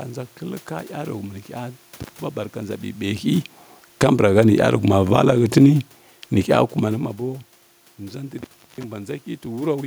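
At 2.00 to 2.20 s an intermittent contact opens the line for 0.17 s: a loose cable or plug briefly breaks the connection, so the speech drops out with crackle at each edge and only faint hiss in the gap.

Automatic gain falling follows at 3.87 to 4.23 s and again at 4.99 to 5.35 s. The gain control judged the input too loud, or its background noise too strong, and eased its gain down by about 4 dB, then about 5 dB, so the speech and room background sink together.

The intermittent contact recurs at 8.38 to 8.84 s, this time open for 0.34 s, with the same crackled cutout and hiss.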